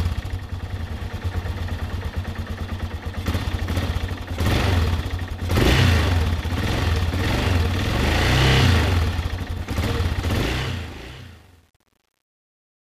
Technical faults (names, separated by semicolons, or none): truncation distortion on a fade